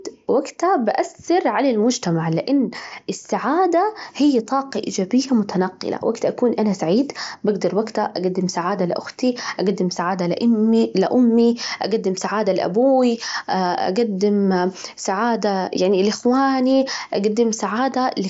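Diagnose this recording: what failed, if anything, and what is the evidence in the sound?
Nothing stood out on listening; the speech sits within the roughly 7.7 kHz band of a wideband Bluetooth headset link, and no failure at any stage is evident in the sound.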